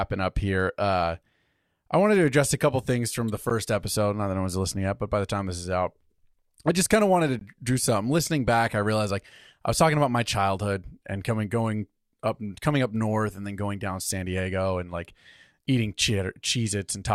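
At 3.50 s, just after "couple things from the", the speech drops out for about 13 ms. At 7.39 to 7.41 s, between "I just kind of" and "to do something", a 20 ms silence opens. Both are gaps at a join of encoded pieces. Separately encoded segments were spliced without trimming their padding. The speech stops with smeared edges, then resumes exactly where it left off.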